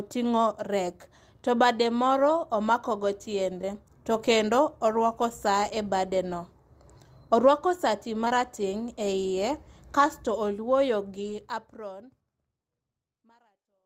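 A lost packet rebuilt from error correction comes at 0.85 to 0.87 s, just before "to bade". About 20 ms was lost, but the next packet carried a low-bitrate copy, so there is no gap, only a brief rough, noisy patch.

Short concealed packet loss follows at 3.61 to 3.65 s. The decoder never received that audio in time and filled the hole by extending the preceding sound, which leaves a quick smear. The same happens at 8.25 to 8.32 s, where two back-to-back losses of about 20 ms each give a slightly longer wobble.

At 11.16 to 11.34 s, during the smooth fade-out that begins around 11 s, there is a longer lost-packet-rebuilt-from-error-correction stretch. About 100 ms, consistent with five separate packets, plays from coarse backup copies and sounds grainy.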